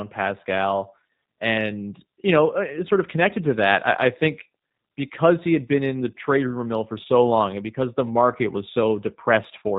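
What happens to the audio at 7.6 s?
At 7.6 s the speech is still passing through the G.729 codec, whose damage runs through the whole clip. The encoder discards the waveform itself and rebuilds the sound from a vocal tract filter, a pitch predictor and a few pulses per 10 ms frame, at a rate that points to an 8 kbit/s setting. Nothing above 4 kHz survives, so the speech sounds dull, plainly rough and synthetic, with a buzzy edge.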